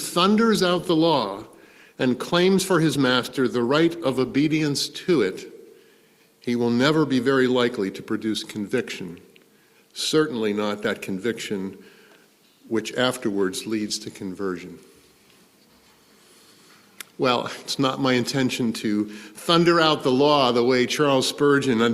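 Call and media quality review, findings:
Call bitrate drop, 0.57 to 4.49 s. Audio turns coarse and muffled, with a watery edge, sustained about 3.9 s before full quality returns. The encoder is likely starved by a falling bandwidth estimate, and the sound fits a cut from roughly 64 kbps to 17 kbps. Spectrogram: upper band abruptly empty across that span, energy smeared and blocky below the cutoff, full bandwidth snapping back at 4.49 s. Waveform: envelope largely unchanged, so the fault is spectral, not level.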